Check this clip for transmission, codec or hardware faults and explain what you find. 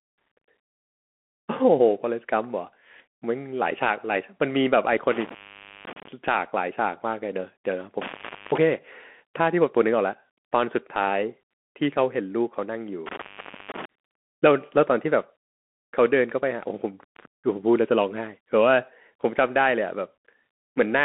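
Two faults are present: codec damage throughout the speech and three brief dropouts from a bad connection.

Throughout, the speech sounds muffled and scratchy with a grainy hiss, and nothing passes above 3.8 kHz. This is the Bluetooth CVSD headset codec, whose one-bit adaptive steps, consistent with a 64 kbps stream, cannot track fast high-frequency detail.

At 5.12 to 6.08 s, 8.01 to 8.58 s and 13.06 to 13.85 s, the sound drops out for about 510, 450 and 480 ms, with crackle at each edge. This is intermittent contact, a loose plug or cable briefly opening the line.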